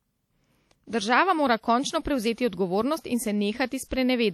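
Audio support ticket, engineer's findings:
Speech ringing and washy throughout, whole clip. Hiss breathes with the signal; quieter detail thinned out. Likely cause: WMA compression, plainly audible damage, consistent with an early WMA encoder at about 48 kbps. Long transform blocks smear quantisation noise over tens of milliseconds; weak spectral lines zeroed.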